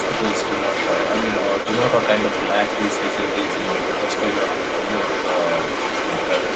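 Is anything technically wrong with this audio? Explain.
Yes. Throughout the clip there is the other side's voice leaking through, likely because the echo canceller missed loudspeaker playback, so a second voice sits roughly as loud as the talker, within a band topping out near 8 kHz.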